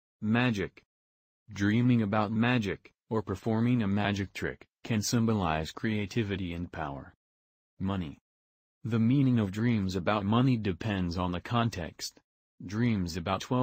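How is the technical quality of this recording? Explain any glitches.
No glitches or technical faults can be heard anywhere in the recording.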